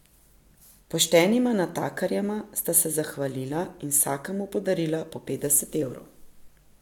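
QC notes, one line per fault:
No faults found.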